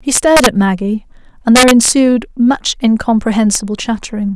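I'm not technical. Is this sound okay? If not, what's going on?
No: integer overflow makes harsh cracks at 0.15–0.46 s, 1.56–1.88 s and 3.55 s, where loud speech peaks wrapped around to the opposite extreme instead of being capped.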